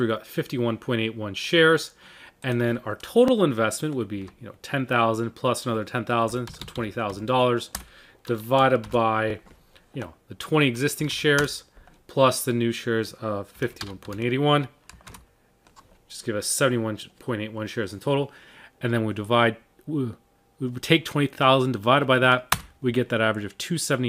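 At 3.28–3.30 s, 9.30–9.33 s, 15.33–15.35 s and 21.35–21.37 s there's a small stutter, a sort of tick. It recurs every 6 s, which points to overlapping chunks. The audio was handled in 6-second blocks, and each new block starts a little before the previous one finished. At every join a sliver of about 21 ms plays twice, and that brief doubling is the catch you hear.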